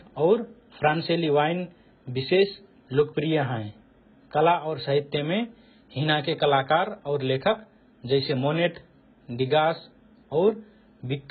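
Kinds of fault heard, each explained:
AAC compression: The speech has nothing above 4.5 kHz and sounds dull and smeared throughout. Sibilants turn fizzy and vowels warble. The likely cause is heavy AAC-LC coding at a very low bitrate that fits 12 kbps, where coarse quantisation starves the upper bands.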